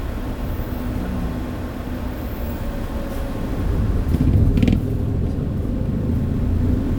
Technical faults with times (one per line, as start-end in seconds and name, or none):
2.57-6.99 crude rate conversion